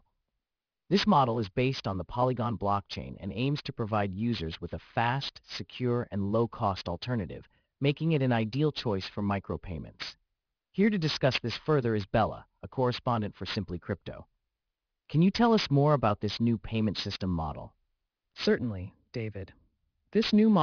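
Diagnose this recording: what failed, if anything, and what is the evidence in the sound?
Aliasing throughout, from sample-rate conversion: sibilants turn gritty as high frequencies fold down. The spectrogram shows mirrored energy, about 15 dB down, against a hard 5.5 kHz edge.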